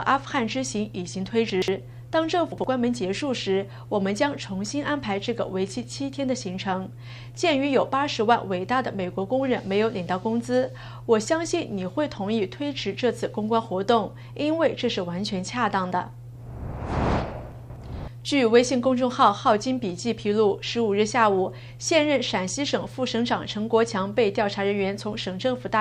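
Chunks out of order at 1.5–1.68 s, 2.52–2.64 s and 17.52–17.76 s: a 60 ms block of audio arrives late and plays after the two, one and three blocks meant to follow it. Each spot sounds like a brief jumbled stutter.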